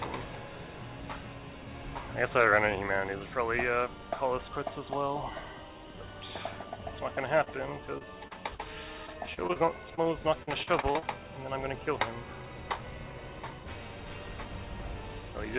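Short concealed packet loss occurs at 7.44–7.48, 7.98–8.05, 8.28–8.33 and 8.55–8.61 s. Each time, 20 to 40 ms of audio missed the decoder and was patched by extending the preceding sound, giving a brief smear. Repeated packet loss (robotic sound) follows from 9.07 to 10.07 s, with seven gaps covering 14% of the span, and from 10.43 to 11.04 s, with five gaps covering 28%. These back-to-back concealments make the sound choppy, and pieces go missing. Throughout, nothing is heard above 4 kHz, which fits a 64 kbps G.711 mu-law call path.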